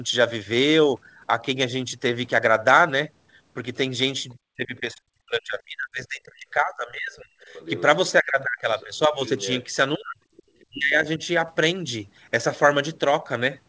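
Speech suppressed in double talk first appears from 4.56 to 7.32 s. The talker's level falls away by as much as about 40 dB, in pieces across roughly three seconds, and the sound turns dull and broken. The likely cause is that the echo canceller heard both sides at once, could not tell the near talker from the loudspeaker echo, and turned the microphone down.

The other side's voice leaking through follows at 7.53 to 7.82 s: a second voice about 15 dB under the talker. This is likely residual loudspeaker sound that the canceller left in the microphone signal.

Suppression returns from 8.21 to 9.20 s, with drops up to about 35 dB. Leakage overlaps it from 8.80 to 9.69 s, again about 15 dB down, so the talker thins out while the far voice surfaces.

A third suppression runs from 9.97 to 11.21 s, dipping about 40 dB. Inside it, from 10.37 to 10.66 s, a faint scrap of the far voice leaks through at about 30 dB below the speech. 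Throughout, the band stops at 8 kHz, consistent with a G.722 call path.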